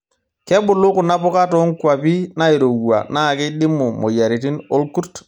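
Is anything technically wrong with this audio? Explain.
No, nothing is technically wrong with this audio. The speech comes through with no audible technical problem at any point.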